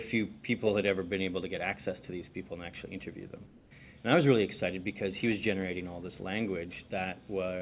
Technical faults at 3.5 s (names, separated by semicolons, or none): comfort noise in place of the background